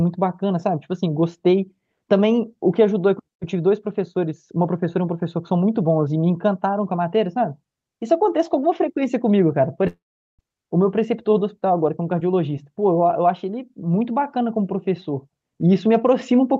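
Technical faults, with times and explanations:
9.87–10.41 s, long network dropout: packets likely stopped arriving for 0.52 s. The receiver stretched the last sound into a fading buzz, then 0.41 s of silence, and the sound resumed with that stretch lost.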